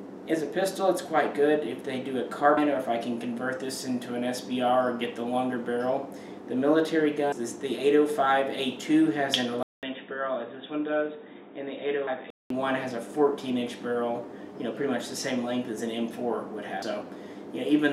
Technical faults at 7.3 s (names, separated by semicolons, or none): audio missing between chunks